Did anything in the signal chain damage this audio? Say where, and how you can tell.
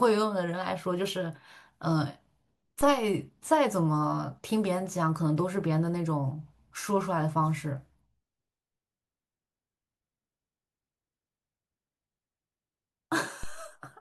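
Yes. A DC step at the converter or input stage: the waveform's zero line jumps by about -28 dBFS at 2.81 s and again at 13.43 s, then decays away through a 2 Hz high-pass. Each jump sounds as a brief low thump while the speech carries on unchanged.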